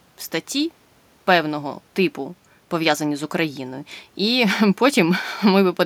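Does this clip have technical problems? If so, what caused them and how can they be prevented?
No, there are no technical faults in this recording, so nothing needs tracing or preventing.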